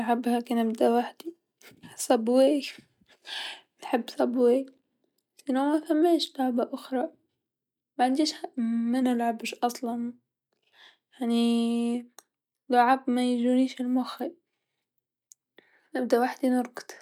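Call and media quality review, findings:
Drift correction step, 2.89–3.81 s (ending just before "نحب صبواي") and 9.02–9.56 s. Speech slows about 5.6% and drops a semitone, then snaps back. Likely clock-matching resampler stepping the playback rate to refill its buffer.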